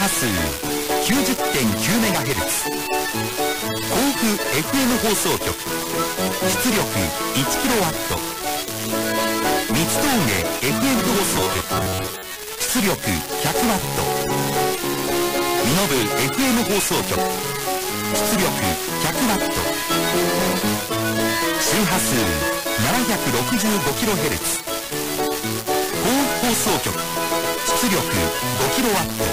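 At 4.38 to 4.49 s, frames out of order: two neighbouring runs of about 46 ms swap places. The sound flutters briefly. At 11.00 to 11.15 s, the same fault returns with runs near 70 ms.

From 11.34 to 12.35 s, a robotic sound from repeated short buffers. A rigid metallic buzz at 93.8 Hz replaces the texture. It likely comes from about 10.7 ms of audio being repeated while roughly half the real signal is skipped.

At 14.84 to 15.03 s, frames out of order again. Runs of about 93 ms are exchanged, giving a longer garbled stretch.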